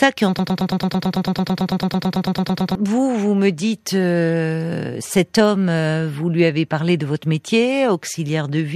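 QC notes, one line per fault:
0.39–2.75 s, broken-record loop: a fragment of about 111 ms repeats exactly, back to back, 21 times, so the speech stutters mechanically and the audio that belonged in that span never plays. This is likely a stalled player, encoder or stream that kept re-sending its last held fragment. On a spectrogram, identical vertical slices tile across the span at roughly 9 per second. The waveform shows the same short shape copied edge to edge.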